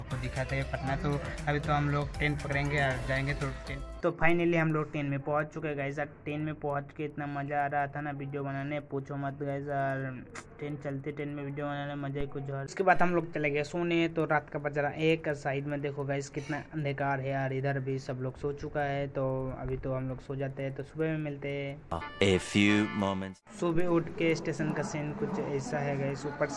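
A regular tick runs through the whole clip at 10 Hz, one every 100 ms, audible wherever there is signal. This is a resampler restarted on every block: each 100 ms block was converted from 48 kHz to 24 kHz on its own, leaving a small error at every block edge.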